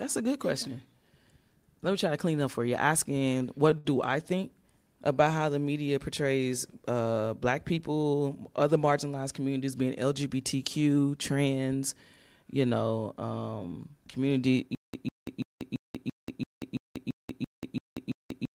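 Repeated stalls (stutter) run from 3.19 to 3.87 s, between "clean up for you" and "I think". The jitter buffer ran dry four times, and the receiver stretched the last sound to fill about 110 ms, the longest gap 67 ms. Nothing is lost, but the speech drags and catches.

Jitter buffer slow-down follows at 5.15 to 5.59 s. Repeated pitch periods add 54 ms to rebuild a reserve, so the speech plays at 89% speed with unchanged pitch and sounds drawn out.

Jitter buffer speed-up, 7.72 to 8.10 s, falls between "media portrays uh black" and "other marginalized communities being". Trimmed pitch periods remove about 50 ms to cut excess delay, so the speech runs at 114% and sounds hurried.

Stutter with silent gaps begins at 14.75 s after "you know um community" and lasts to the end. A 150 ms burst repeats every 337 ms, separated by 187 ms of digital silence, likely from a stalled stream replaying its last fragment at each retry. 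The speech that should fill that stretch is lost.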